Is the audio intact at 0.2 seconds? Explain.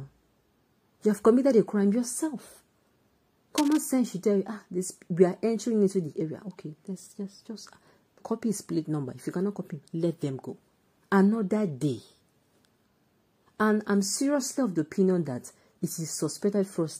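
Yes, at 0.2 seconds the audio is intact, with no dropout, click, distortion or other fault to be heard at that moment.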